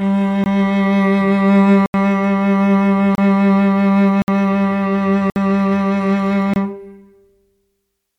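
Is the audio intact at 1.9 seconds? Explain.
No. The music drops into a block of digital silence from 1.86 to 1.94 s, an 80 ms silent gap. The signal cuts out and returns without any fade, leaving a short hole.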